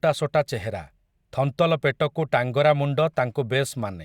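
A short speech recording whose signal carries no audible technical faults at any point.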